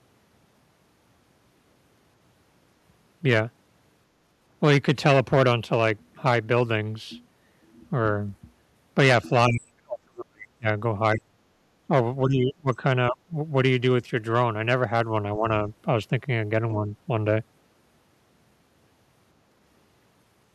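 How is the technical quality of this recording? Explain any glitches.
The speech drops out in patches: between 9.48 and 10.68 s, 11.15–11.38 s, 12.25–12.82 s, 13.1–13.35 s and 15.38–15.47 s it sinks sharply, by up to about 40 dB early on and only slightly by the last dip. This is likely speech suppressed in double talk: with both sides speaking, the echo canceller mistook the talker for loudspeaker echo and attenuated it.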